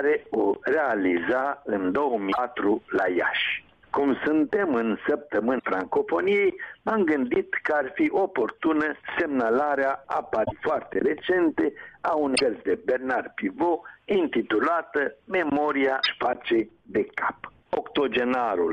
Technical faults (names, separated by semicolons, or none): damaged data in a compressed stream